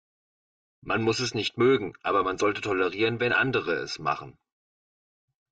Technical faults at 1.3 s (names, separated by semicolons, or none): channel delay (comb filtering)